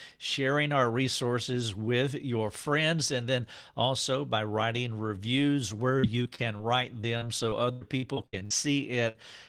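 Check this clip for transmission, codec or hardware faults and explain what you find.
The clip has network transmission faults: two stretches of repeated packet loss and one short burst of packet loss near the end.

From 5.99 to 6.61 s, just after "by writing reviews where", and again from 7.01 to 8.52 s, the sound turns choppy and robotic. This is repeated packet loss: four and then nine short holes, the longest 94 ms, each patched by continuing the previous sound.

From 9.08 to 9.17 s, the sound is briefly held and fading, then jumps ahead. This is a burst of packet loss: a 63 ms gap was filled by extending the last sound, and about 60 ms of audio is missing.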